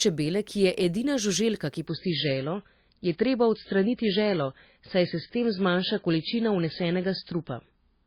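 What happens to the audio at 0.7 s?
Nothing goes wrong at 0.7 s; the speech there plays through intact, with no dropout, click or distortion.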